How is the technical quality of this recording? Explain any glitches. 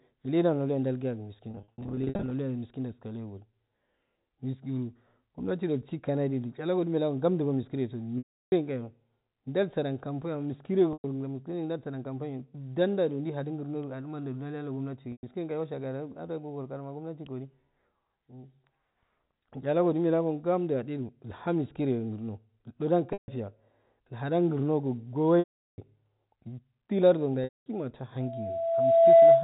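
Two kinds of fault affect this recording: repeated packet loss with pitch repetition, and a loudspeaker feedback squeal at the very end. The narrow telephone band, with nothing above 4 kHz, comes from G.711 coding.

Packet loss with pitch repetition occurs at 1.51 s (about 430 ms lost, scattered over 800 ms), 8.18 s (340 ms), 10.93 s (110 ms, between "jai sajan kam boyamma" and "miskireyo jai sajan kambayo"), 15.12 s (110 ms), 23.13 s (150 ms), 25.39 s (390 ms) and 27.44 s (220 ms). The receiver loops the last pitch period, so each gap holds a buzzy tone that fades toward silence. Unlike a plain dropout, it never cuts straight to silence.

A loudspeaker feedback squeal starts at 28.20 s and continues to the end. A single 666 Hz tone swells over roughly a second to about 15 dB above the speech as the loop gain exceeds one. Its steady, swelling pitch separates it from the brief, decaying buzz of the concealment.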